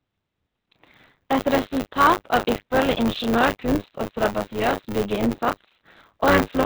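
From start to end, the speech carries Opus voice compression at a very low rate, about 6 kbps, which fits the SILK narrowband mode. Nothing reaches above 4 kHz. The voice sounds muffled, hoarse and slightly robotic. The coarse excitation coding causes heavy damage.

Buffer tearing also runs throughout. The writing and reading sides of the playback buffer have slipped, so each 10 ms period mixes in a slice, about a fifth, of audio some 30 ms old. The hard joins make a robotic 100 Hz buzz whenever speech sounds.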